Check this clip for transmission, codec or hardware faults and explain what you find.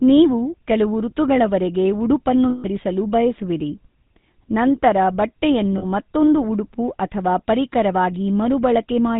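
Two problems show up: the whole clip has been through a GSM full-rate codec, and there are two short dropouts from lost GSM frames.

Throughout, the speech has that clearly audible buzzy, gravelly grain and nothing above 4 kHz, which fits the old 13 kbps full-rate coder. It rebuilds the vocal tract from a filter model fed with sparse, regularly spaced excitation pulses, so fine detail is lost.

From 2.50 to 2.65 s, and again from 5.78 to 5.85 s, frames went missing. The decoder just repeated the last good frame's settings, so each gap becomes a rough, metallic held ring, about 140 ms for the first and 40 ms for the second.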